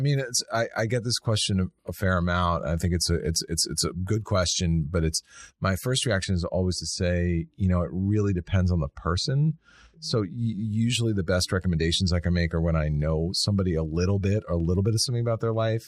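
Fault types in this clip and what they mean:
De-emphasis applied wrongly: a treble-cut stage meant to reverse pre-emphasis acted on speech that had not been boosted, tilting the response smoothly downward to about 10 dB lower at 10 kHz than at 1 kHz, so from 6.24 to 10.38 s the speech turns dull and muffled.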